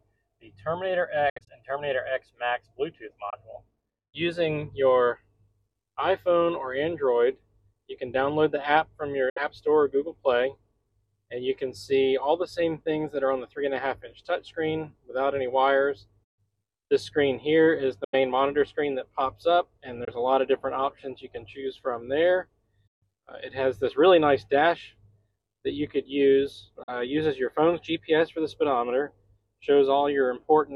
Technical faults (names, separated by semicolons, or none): Bluetooth dropout